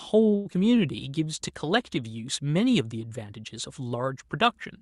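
Speech passed through an Opus call path, with content cut off above about 12 kHz. It shows three early delivery faults. From 0.35 to 0.47 s there is a short stall from a late packet. The jitter buffer ran dry, so the receiver held the last sound for about 0.1 s and then resumed where it stopped. Nothing is lost, but the sound drags with a faint buzz or dip. On a spectrogram the harmonics run flat and unchanging for that stretch. From 0.53 to 0.56 s comes short concealed packet loss. About 40 ms of audio never arrived, and the receiver covered only a few milliseconds by extending the previous sound. It skipped ahead, cutting the delay by a few tens of milliseconds. This is heard as a quick smear or wobble, and it shows as a small discontinuity in the waveform envelope. From 0.71 to 0.97 s a jitter buffer slow-down stretches the audio by 40 ms, playing it at 87% speed with the pitch unchanged. 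The buffer repeated single pitch periods to rebuild its reserve, so sounds are drawn out, and the spectrogram shows harmonic bands elongated without any shift in frequency.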